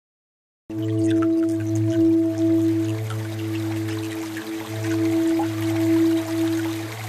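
For the first 0.70 s there is only digital silence, then the music enters abruptly mid-sound, with no attack or fade-in. This cut-off start means recording or streaming began late, so the opening of the passage was never captured.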